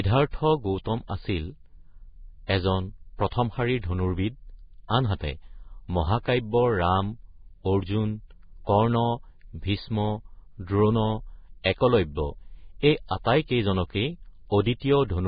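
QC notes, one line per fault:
throughout: Vorbis compression. The speech sounds dull and grainy, with nothing above about 4.9 kHz, and what treble remains below that edge is rough and hissy, so consonants lose their crispness and attacks blur. This is likely heavy Vorbis compression at a rate that fits roughly 16 kbps. At that rate the encoder lowers its cut-off and quantises the upper residue so coarsely that fine detail turns into noise of similar energy.
12.15–12.17 s: pre-echo. A brief smear of hiss, about 23 ms long, comes just before a sharp onset, and the attack itself sounds softened rather than clean. The transform coder spreads its quantisation noise across the whole block. Because this onset falls late in its block, noise sized for the loud attack also fills the quiet moment ahead of it, where nothing masks it.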